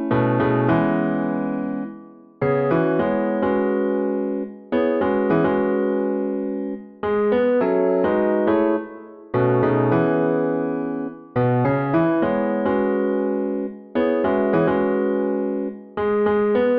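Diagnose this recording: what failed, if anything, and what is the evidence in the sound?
Nothing failed: no stage of the chain, from wiring through conversion, buffering, processing, transport, storage or playback, leaves any audible trace of a problem anywhere in the recording.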